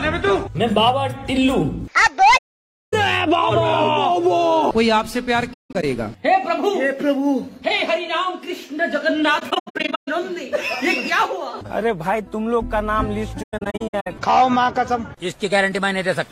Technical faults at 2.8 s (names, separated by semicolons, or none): AAC frame loss with muting